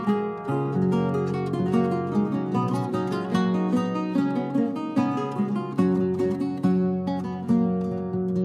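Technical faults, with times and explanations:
No technical faults are audible anywhere in this clip.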